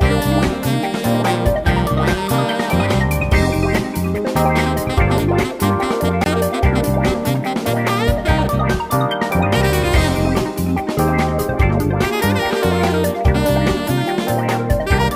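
At 6.24 to 6.26 s a block of digital silence, about 20 ms, drops in; the output buffer likely went unfilled, so abrupt edges produce a short hole.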